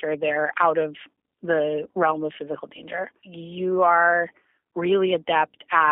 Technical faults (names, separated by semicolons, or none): G.729 codec